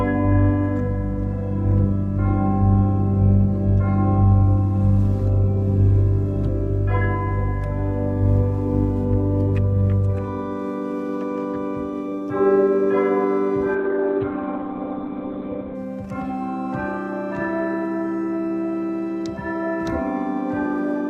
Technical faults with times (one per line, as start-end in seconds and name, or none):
13.75-15.75 adaptive stream at a lower bitrate